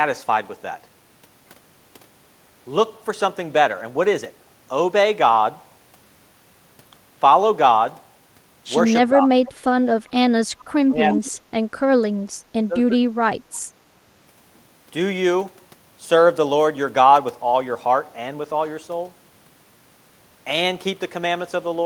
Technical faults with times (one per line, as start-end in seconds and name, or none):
9.09-9.30 speech suppressed in double talk
9.45-9.52 echo leak
10.58-10.72 echo leak
10.84-11.46 speech suppressed in double talk
11.12-11.21 echo leak
12.31-13.04 speech suppressed in double talk